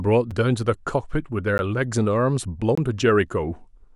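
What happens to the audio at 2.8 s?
The output buffer likely went unfilled for a moment, leaving a block of digital silence from 2.75 to 2.78 s, about 23 ms long, which fits a 1024-sample buffer. The speech drops abruptly to silence and returns with no fade, and the gap is heard as a brief pop-like hole.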